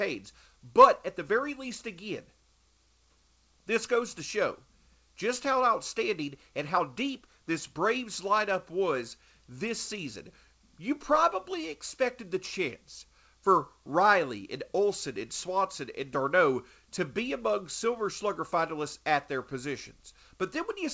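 No faults are audible in the speech; it shows only the expected character of a wideband call path, with nothing above 8 kHz, which fits G.722 coding.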